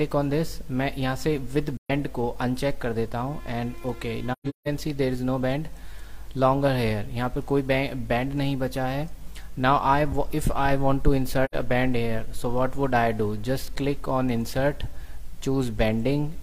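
Soft-edged dropouts, with the sound fading out and back in, occur at 1.77 to 1.91 s, at 4.32 to 4.68 s as a broken stretch of gaps whose longest run is around 150 ms, and at 11.45 to 11.54 s. This is AAC frame loss with muting. The decoder zeroed the missing frames' spectrum, and the overlapping windows smeared each hole's edges over roughly a frame of about 43 ms.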